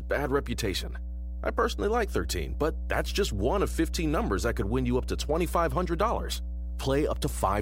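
A ground loop or nearby transformer is coupling the 60 Hz power line into this speech recording, leaving a steady mains hum throughout that sits nearly as loud as the talker.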